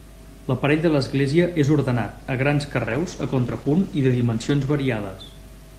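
Speech, with a steady mains hum running under the whole clip. It is a low 50 Hz tone with a few low harmonics, sitting about 10 dB below the voice. A ground loop or a nearby transformer is coupling the power line into the signal. From 2.83 s to 4.83 s there is a call bitrate drop. The call's bandwidth estimate fell, and the encoder was forced to code much more coarsely. The speech turns rough and muffled, with the highs cut away, for about 1.9 s. This fits a fall from around 40 kbps to about 13 kbps.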